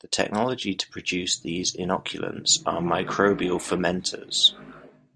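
No audible technical faults.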